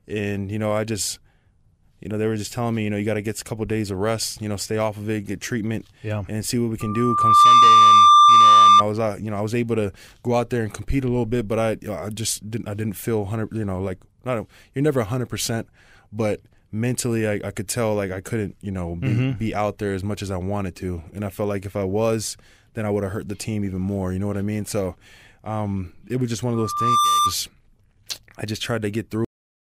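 A speech recording twice swells into a steady 1.2 kHz whine: from 6.80 to 8.84 s it builds over most of a second to a squeal well above the speech, and from 26.54 to 27.34 s it returns more briefly and less loudly. This is loudspeaker feedback squeal, where the microphone re-amplifies its own loudspeaker at that frequency. At 29.25 s the speech stops abruptly into dead digital silence with no decay. That is a cut-off end, where the final buffers were never written.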